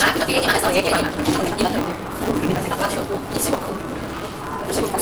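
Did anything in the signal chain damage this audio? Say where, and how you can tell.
Yes, at the driver or buffer stage: a block size mismatch (truncated) runs through the whole clip. A steady buzz at 188 Hz, plus sound running 1.88 times fast at near-normal pitch, points to a 256-sample reader discarding each longer block's tail. Spectrograms show 188 Hz harmonic lines; waveforms show regular splice discontinuities.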